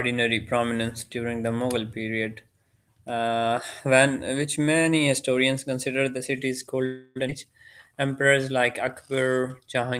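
A speech recording in which, right after "historians consider the city's", the sound freezes from 6.85 to 7.18 s: the last sound carries on as a fading buzz for about 300 ms with nothing lost. That is a call audio freeze, likely from delayed packets draining the jitter buffer, and it differs from a dropout because speech resumes exactly where it stopped. Just after it, at 7.28 to 7.30 s, a skip ahead jumps forward almost seamlessly, discarding roughly a fifth of a second. Unlike the freeze, this removes speech instead of inserting a gap, as a stretch of audio is dropped. Finally, jitter buffer slow-down stretches 7.89 to 8.59 s to 89% speed (85 ms added) and 9.11 to 9.99 s to 90% (94 ms added). Repeated pitch periods drag the syllables out while the pitch stays unchanged, which separates this from a tape-style slowdown that would also lower the pitch.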